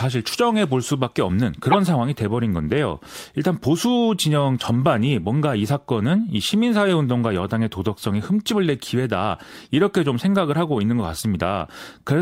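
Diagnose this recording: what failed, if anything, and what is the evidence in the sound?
A short, loud glitch cuts across the speech from 1.72 to 1.76 s, peaking around -5 dBFS. This is a corrupt frame decoded at the codec stage: a single compressed frame carried flipped bits, and the decoder played it anyway, putting energy at the wrong frequencies.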